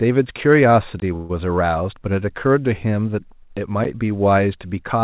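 At 1.00 to 1.02 s the speech drops into a 20 ms block of digital silence: the sound just cuts out and comes straight back with no fade, so you hear a short hole. That's the classic sign of an output buffer that didn't get filled in time.

Right after, from 1.16 to 1.31 s, there's a call audio freeze. The last bit of sound gets stretched into a buzzy smear for about 132 ms rather than going quiet, then the speech picks up exactly where it left off, with nothing skipped. That's likely packets arriving late and the jitter buffer running dry. The receiver filled the wait, so the speech after it now runs about 132 ms late.

At 3.84 s there's a second block of digital silence, only 10 ms this time, which comes across as a quick tick. Over all of this you can hear the narrow G.711 mu-law call sound, with nothing above 4 kHz.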